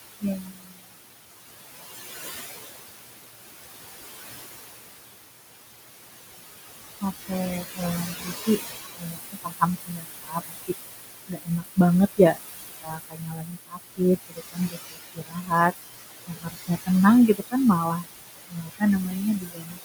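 Noise suppressor artifacts run through this speech recording: the suppressor pulls the steady room noise down by about 19 dB frame by frame, so the noise dips between phrases and swells back under them. The same processing also misjudges parts of the speech as noise, causing speech cut by the noise suppressor at 0.21–0.84 s, 7.0–10.74 s, 11.27–15.52 s, 16.27–18.82 s and 19.4–19.78 s, where soft sounds drop by about 18 to 22 dB and come across as swallowed or faint. The room noise itself, sitting about 8 dB below the speech, is simply part of the recording space.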